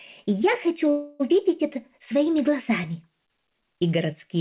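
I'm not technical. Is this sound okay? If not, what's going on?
No. At 0.9 s the audio stalls in a call audio freeze: a fading buzz fills about 0.3 s, likely from delayed packets, then carries on at 1.22 s with nothing lost, through a call line that already cuts the treble.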